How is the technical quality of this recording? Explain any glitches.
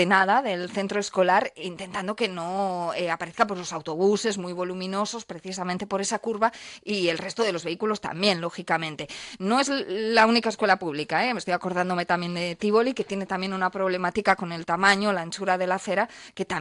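No glitches turn up anywhere in the recording, so there's nothing to explain.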